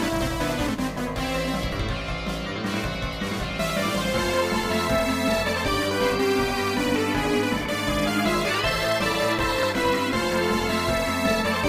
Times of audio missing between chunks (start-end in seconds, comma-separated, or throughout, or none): 1.72, 3.70, 7.65, 9.63